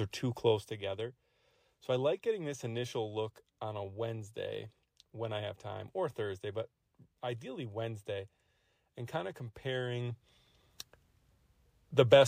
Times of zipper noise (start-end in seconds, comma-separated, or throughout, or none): 0.44-0.80